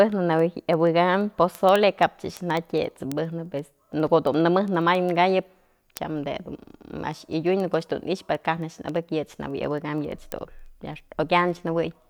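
A receiver on its own unlocked clock drifts roughly 300 ppm against the digital source, dropping or repeating single samples. From 0.12 s to 12.09 s, word clock ticks run through the speech: sharp, uneven clicks about every 70 ms, around two hundred in all.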